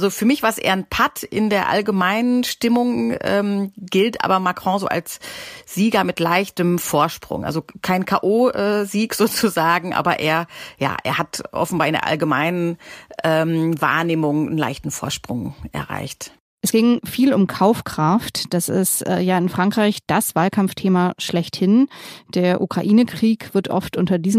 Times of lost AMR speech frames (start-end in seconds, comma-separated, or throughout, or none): none